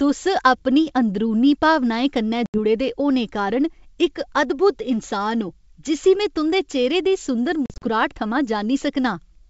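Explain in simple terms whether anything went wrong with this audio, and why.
Yes. Packet loss on an ADPCM call cuts hard-edged silent holes into this speech at 2.46 to 2.59 s (about four packets) and in scattered gaps from 7.66 to 7.89 s. Unlike a plain dropout, each return lands slightly wrong, with a click or brief distortion, before settling.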